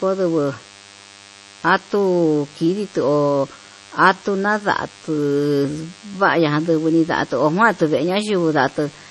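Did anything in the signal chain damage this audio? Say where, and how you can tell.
Yes, there is interference in the analogue wiring. A thin, steady DECT cordless phone buzz runs through the whole clip, sitting roughly 25 dB below the speech. A nearby DECT handset or base transmits a burst every 10 ms, and the audio circuit rectifies it, so the audio carries a 100 Hz rate with a dense stack of harmonics. On a spectrogram this appears as evenly spaced horizontal lines at multiples of 100 Hz from start to finish. The waveform shows a faint periodic ripple in the pauses.

The codec stage has also done heavy damage, most likely MP3 compression at a low bitrate in the region of 32 kbps. The speech sounds watery and swirly, sibilants chirp metallically, and consonant onsets smear. A spectrogram shows a hard ceiling, with nothing above 11.5 kHz across the full clip. Below that ceiling there are patchy holes where weak frequency lines blink on and off from frame to frame, because the encoder zeroed whatever it judged inaudible once bits ran short.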